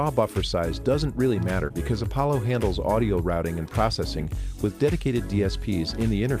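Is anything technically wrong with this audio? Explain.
Yes. There is one fault: a short concealed packet loss from 1.67 to 1.71 s. About 30 ms of audio never reached the decoder in time. The receiver covered the gap with about 23 ms of synthesised sound. It extended the last sound it had, either by repeating its pitch or by generating shaped noise, and then blended back into the real signal. The result is a brief smear or wobble at that moment.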